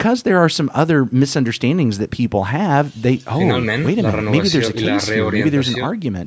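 No technical faults can be heard in the speech: the signal shows only the ordinary effects of call microphone processing, with the lowest bass trimmed by its high-pass filter and nothing above 8 kHz.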